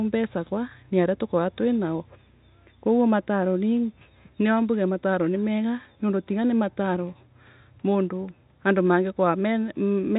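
Speech over G.711 telephone coding, band-limited to about 3.8 kHz as that format requires, with nothing technically wrong to report.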